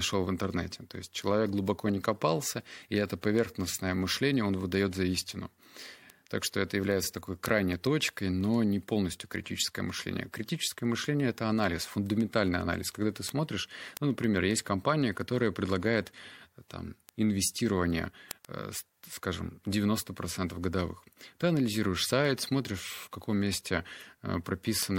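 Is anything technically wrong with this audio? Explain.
Yes. Word clock ticks run through nearly the whole speech clip, from 0.13 s to 24.96 s. They come at a steady rate of roughly one every 0.15 s, around two hundred in all. The receiving device is running on its own clock rather than locking to the sender's, a mismatch that points to something on the order of 150 ppm. Each time the two clocks slip past each other, one sample is dropped or repeated, and this is heard as a sharp tick of uneven strength.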